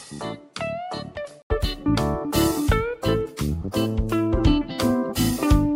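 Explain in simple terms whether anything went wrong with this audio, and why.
For the first 1.5 seconds the audio sounds dull and slightly boxy, a little quieter, with a faint extra background hiss. At about 1.5 s there is a brief gap of roughly 80 milliseconds, and then the sound opens up and becomes clearer. This is the pattern of an input switched to a poorer device. The recording likely began on a lesser microphone that cuts off the highest sounds above about 11 kHz and brings its own tone and noise, before changing to a better input.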